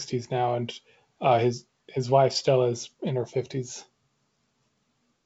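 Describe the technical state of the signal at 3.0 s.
At 3.0 s the speech is intact, carried as G.722 wideband telephone audio at 64 kbit/s with nothing above about 7.7 kHz, and no fault can be heard there.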